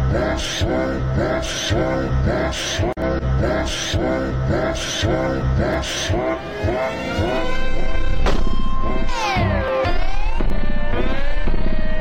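Dropped buffers, most likely from overruns, occur at 3.02, 5.74, 9.68 and 10.5 s. At each point the sound jumps abruptly forward with no gap. This suggests samples were overwritten before they were read, and the two edges were spliced together. Three skips lose around 20 ms each. The one at 9.68 s is larger, roughly 70 ms, making a longer jump in the audio.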